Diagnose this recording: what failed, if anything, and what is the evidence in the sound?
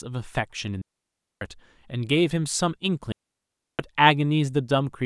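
Digital wireless dropout on the radio link: clean, noiseless holes at 0.82–1.41 s and 3.12–3.79 s, flat in the waveform and blank on the spectrogram, as the receiver mutes lost data.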